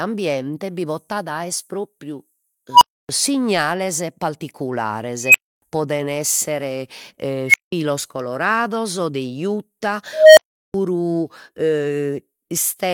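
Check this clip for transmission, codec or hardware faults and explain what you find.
An unstable filter fault appears four times: a recursive filter runs away, its output swelling into a tone that clips, then overflows and drops to silence until reset. Squeals near 1 kHz at 2.72–3.09 s; 3 kHz at 5.25–5.62 s, before "poden esser"; 2 kHz at 7.48–7.72 s; 700 Hz at 10.13–10.74 s. Build-ups last 61–240 ms, silences 186–372 ms.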